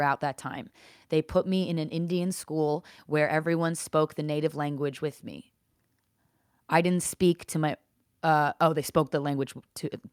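A short speech recording with no technical faults to report. Nothing in it needs a time or a cause attached.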